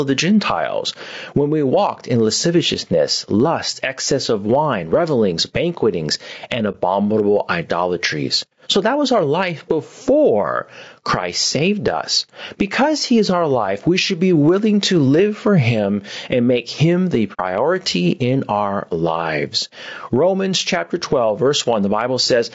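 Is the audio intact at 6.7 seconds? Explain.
No. From 6.71 to 6.76 s, just after "wine revelings banquetings and", the decoder had a gap in its data and filled it with silence. This is AAC frame loss with muting. About 30 ms of coded audio went missing, which fits a single lost frame. The decoder zeroed that frame's spectrum, and the overlapping windows on either side spread the change. The sound fades out and back in around a brief dip.

The level at that moment is also affected. The input gain is likely set far too high, so a fast limiter or compressor keeps pulling it down whenever the sound gets loud. That is gain pumping, with a swing of about 10 dB. Loud and quiet parts are squashed toward one level.

The surrounding sound also carries low-delay AAC compression, likely AAC-ELD at 32 kbps. Its short frames resolve the pitch harmonics of the voice poorly, and at this bitrate the damage is plainly audible. 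The voice sounds rough and grainy, with noise filling the spaces between harmonics and a dulled, synthetic-sounding top end.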